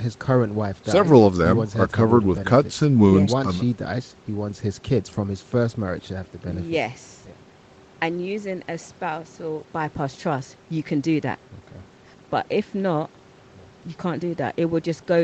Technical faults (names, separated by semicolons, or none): none